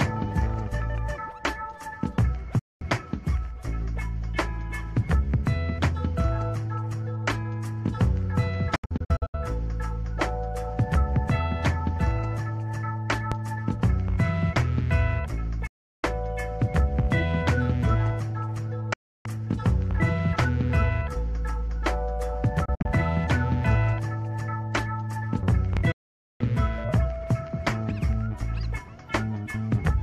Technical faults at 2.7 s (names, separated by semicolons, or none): digital broadcast dropout